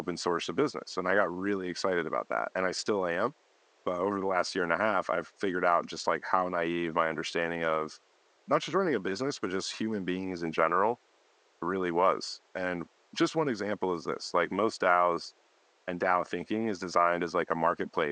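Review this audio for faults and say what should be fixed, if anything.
No faults; nothing needs fixing.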